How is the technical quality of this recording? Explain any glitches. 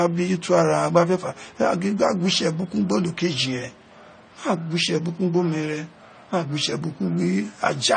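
The technical quality is limited by stacked codec damage across the whole speech recording. Nothing is present above 9 kHz, and the artefacts of two different low-bitrate coders are heard at once, likely from transcoding between lossy codecs. The smearing fits an MP3 stage near 40 kbit/s re-encoded as AAC-LC near 32 kbit/s, with the second coder wasting bits on the first's errors and adding its own.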